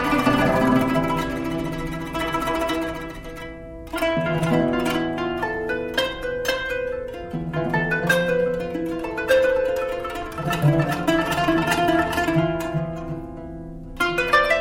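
No faults to report; nothing audible points to a problem in capture, processing or playback.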